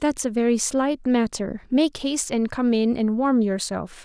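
Nothing goes wrong anywhere in this bit of speech, so there's no fault to point to at any moment.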